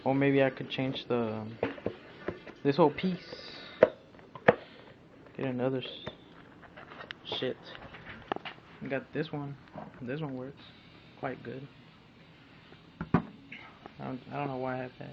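No technical faults can be heard anywhere in the audio.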